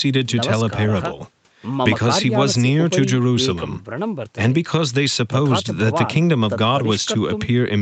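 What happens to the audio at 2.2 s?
At 2.2 s the speech is intact, carried through the call path with its usual band limit at about 8 kHz and no fault at that moment.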